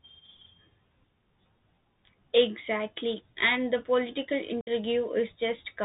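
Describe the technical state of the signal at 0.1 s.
At 0.1 s the speech is carried through a Bluetooth CVSD headset codec, as for the whole clip. Single up-or-down bits with an adapting step, fitting a 64 kbit/s stream, cut everything above 4 kHz, roughen s sounds and leave granular hiss, with the codec damage plainly audible.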